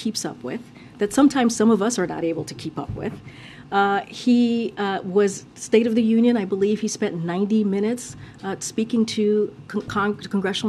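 At 9.88 s, compressed frames are skipped: a few whole frames, about a tenth of a second, never reach the output, so the sound jumps forward. The waveform and spectrogram show an abrupt discontinuity. The frames are 26.1 ms long.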